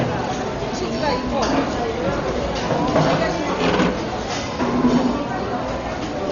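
From start to finish the audio is dull and band-limited, with a rough, fluttering grain clinging to tonal parts of the sounds, damage that most likely comes from heavy Dolby Digital compression at a bitrate around 40 kbps. Starved of bits, the encoder drops everything above 6.9 kHz and leaves many frequency lines without mantissas, so the decoder fills them with dither noise. A spectrogram shows a hard ceiling at 6.9 kHz and speckled, blocky noise around harmonics.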